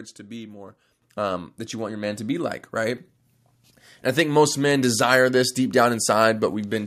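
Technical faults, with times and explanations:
1.02 s, microphone volume stepped up: the call software judged the microphone too quiet and raised the device's input volume in a single jump of about 9 dB, between "to be more" and "um that you want". Because the change happens at the input, before anything is separated, the voice and the background noise grow louder together and instantly, so the speech suddenly sits closer and the room tone rises with it mid-sentence.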